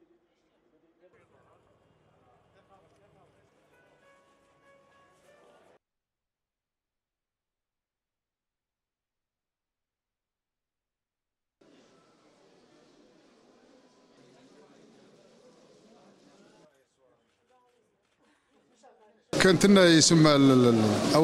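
Nothing here calls for comment, since no technical faults turn up anywhere in the audio.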